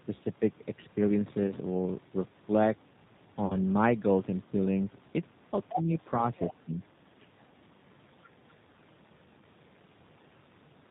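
From start to finish the speech carries the sound of the G.729 codec at 8 kbit/s. The codec rebuilds each 10 ms frame from a vocal tract filter, a pitch predictor and a handful of pulses, so the voice comes out plainly rough and slightly synthetic, with nothing above 4 kHz. A simple low-pass filter would only dull the sound. Here the rough, synthetic texture inside the band shows that the signal was modelled rather than just filtered.

At 1.47 to 1.52 s comes the first VoIP packet loss concealed by the speech codec. About 20 ms of audio went missing, which fits one lost packet. The decoder carries on from its last pitch and filter settings at falling gain, so the sound smears into a brief buzzy tone or coloured noise and the voice stays weakened until about 1.52 s. At 3.46 to 3.57 s a longer loss of about 40 ms, which fits two consecutive packets, gives a longer stretched, fading sound before the speech recovers. 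A plain dropout would leave silence or a click. These gaps are instead filled with a continuation of the last frame, and the damage trails on after the lost audio ends.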